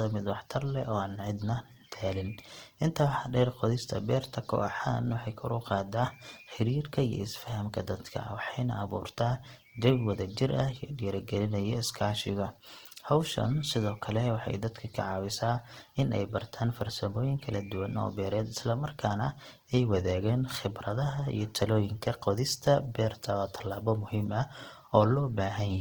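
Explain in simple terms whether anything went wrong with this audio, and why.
The speech sounds grainy and rough from start to finish, with a noisy fizz on it, likely from heavy Opus compression squeezing the sound into too little data.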